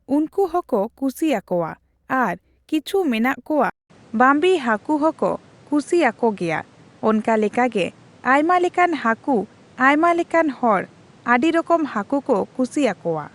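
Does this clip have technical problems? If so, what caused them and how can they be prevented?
Yes. From 3.70 s to the end at 13.35 s, the input was likely switched to a poorer device. A 200 ms silence marks the switch, then nothing above 10.6 kHz remains, so the speech turns duller and a faint new background noise appears while the level stays about the same. To prevent it, lock the recording input to one chosen microphone and turn off automatic device switching before recording.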